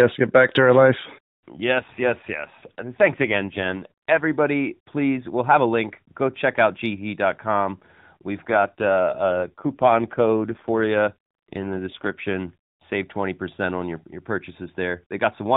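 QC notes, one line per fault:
1.75–4.25 s and 8.48–12.15 s, AMR rate drop: in both stretches the speech suddenly turns rougher, buzzier and more synthetic, then eases back. The phone band stays put and nothing drops out, which fits the link forcing the AMR narrowband encoder down from its usual 12.2 kbps to about 5.9 kbps. That frees bits for error protection, but leaves fewer pulses to drive the vocal-tract model, so the excitation sounds coarse until the rate recovers.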